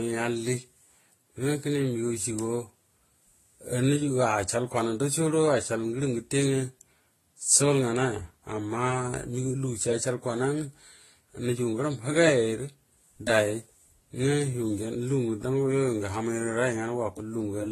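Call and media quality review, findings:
Transcoding between lossy codecs, throughout. Speech band empty above 12.8 kHz. Two kinds of coding artefacts heard together, likely a low-bitrate AAC-LC encode re-encoded to Vorbis at a similar rate. Second codec spends bits re-coding first codec's artefacts and adds its own.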